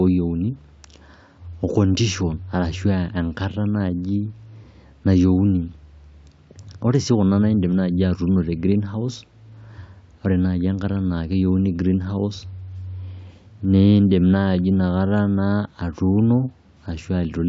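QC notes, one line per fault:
No faults found in this clip.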